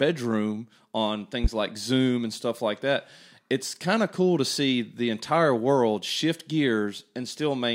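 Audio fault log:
1.44–1.48 s, loud pop: a single sharp pop rises about 15 dB above the speech, which carries on underneath without a break. A sudden voltage step or pulse, likely from a plug, switch, static or driver glitch, was added to the signal and shaped by downstream circuitry.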